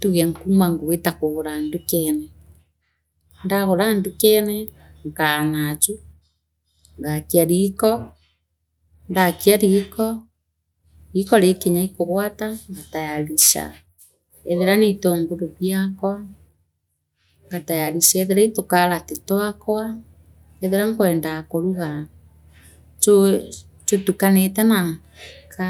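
A stretch of speech, and there's nothing technically wrong with it that I can hear anywhere along the way.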